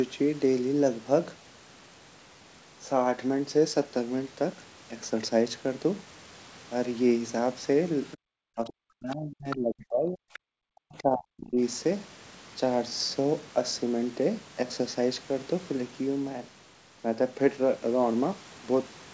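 At 8.11 s a faint second voice leaks through, likely the other side's voice leaking through from the loudspeaker past the echo canceller, about 20 dB under the talker; it shows as a low-energy smear of harmonics. From 8.17 to 8.26 s the background is gated by the echo canceller: room sound drops by about 40 dB, a near-flat gap in the waveform and an empty band on the spectrogram. From 8.54 to 10.26 s the speech is suppressed in double talk, likely the canceller turning the talker down while the far end speaks, with dips of roughly 40 dB. The waveform envelope sags, all below the call's 8 kHz ceiling. Further leaks come at 9.11 s (about 30 dB down), 9.5 s (about 10 dB down) and 10.33 s (about 20 dB down), each a brief scrap of another voice. A second suppression from 10.63 to 11.6 s carves similar gaps.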